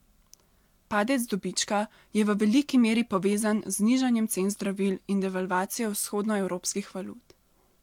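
Nothing to flag here, as the speech carries on without any technical faults turning up at any point.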